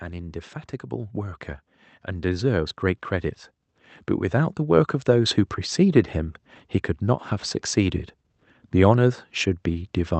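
Speech, carried over a call path with the top end held near 8 kHz. Automatic gain rising is heard three times: 0.05–1.49 s, 2.05–2.89 s and 4.31–5.4 s. Each time the level climbs about 4 dB. Voice and background swell together as the gain control reacts to quiet input.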